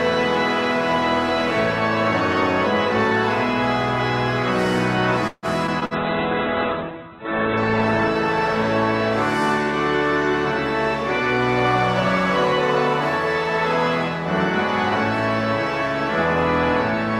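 From 5.27 to 5.94 s the sound turns choppy, with pieces dropping out and the longest hole about 150 ms. This is repeated packet loss (robotic sound). Data kept going missing, and each hole was patched by stretching the preceding sound, covering roughly a third of the span.

Right after, from 5.96 to 9.43 s, the audio goes muffled and rough as the top end collapses from 20 kHz to about 4 kHz. This is a call bitrate drop. The encoder was pushed from roughly 48 kbps down to about 8 kbps and stayed at the lowest rate for 1.3 s.

Within that stretch, from 6.92 to 7.24 s, the sound drags, running at 83% speed with its pitch unchanged. This is a jitter buffer slow-down. The receiver repeated short fragments to rebuild its reserve, adding 64 ms of extra audio.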